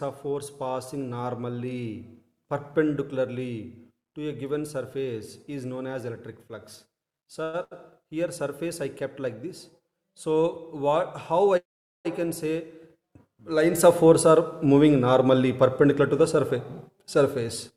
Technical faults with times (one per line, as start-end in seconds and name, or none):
7.43-7.55 call audio freeze
7.63-7.73 short stall from a late packet
11.57-12.07 call audio freeze
15.20-17.72 jitter buffer speed-up